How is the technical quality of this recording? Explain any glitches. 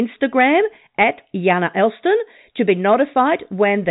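No glitches can be heard in this speech recording: it carries the narrow band of G.711 telephone coding, with nothing above about 3.8 kHz, and nothing in it breaks, drops out or jumps.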